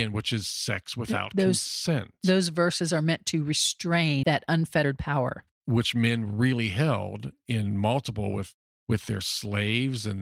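At 4.23 s the speech skips ahead: about 0.7 s of audio is dropped with no fill, so the two sides of the cut join almost directly. From 4.47 to 6.53 s a jitter buffer speed-up removes short pitch-period pieces, about 0.2 s in total, so the speech runs 11% faster at unchanged pitch and sounds hurried.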